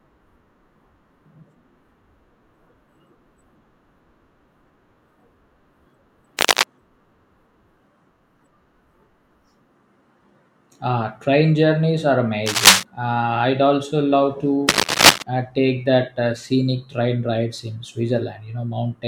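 A loose or worn connector, cable or control being moved is the likely cause: its contact resistance jumps about rapidly, adding dense, irregular noise bursts to the speech. This cable scratch noise appears from 6.39 to 6.64 s at roughly the level of the speech, then from 12.46 to 12.83 s and from 14.69 to 15.22 s, both somewhat louder than the speech. Each burst is heard as a brief scratching rustle over the sound.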